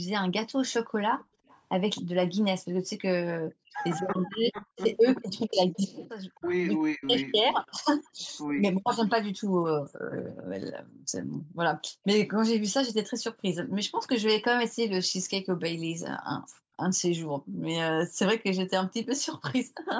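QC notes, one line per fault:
0.72–8.36 s and 12.03–13.42 s, echo leak: a delayed copy of the far side's voice trails the original by 263 ms. It sits around 25 dB below the main speech in the first stretch and around 40 dB below in the second. The cause is likely a loudspeaker's sound reaching the microphone and getting past the echo canceller. It differs from room reverb because it is a distinct, fixed-delay repeat rather than a smooth decay.
1.24–1.47 s, 9.3–12.03 s and 16.39–19.77 s, background gated by the echo canceller: the room tone drops out while the loudspeaker side plays and returns when the canceller releases. The dip reaches about 31 dB in the first brief event and about 40 dB in the later two. The gaps add up to a fifth of a second, around a second and a half, and under a second respectively. Only the background vanishes. No talker is cut, which separates this from double-talk suppression.
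3.57–8.62 s, speech suppressed in double talk: the near talker's voice dips and breaks up in pieces, falling by roughly 40 dB at its deepest, for about a second and a half in total. Both sides are talking here. The likely cause is the echo canceller failing to tell the local voice from the loudspeaker echo and attenuating both. Unlike background gating, the speech itself is chopped, and it coincides with the echo leak heard in the same span. The call microphone processing limits content to 8 kHz throughout, which is normal band-limiting rather than part of these faults.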